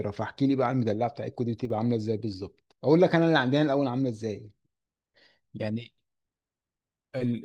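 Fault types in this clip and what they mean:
One channel drops out: from 1.65 to 1.70 s the speech abruptly sinks by about 6 dB, then snaps back, which points to one stereo side likely vanishing before the mono sum. Unlike a full dropout, the sound drops in level but never goes silent.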